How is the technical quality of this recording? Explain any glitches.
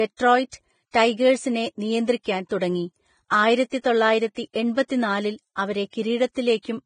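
Quality is poor, with heavy lossy-codec damage throughout the speech. Likely Vorbis compression at a low bitrate, around 21 kbps, removes everything above 9.7 kHz and coarsely quantises the remaining treble, leaving grainy hiss and roughened tones.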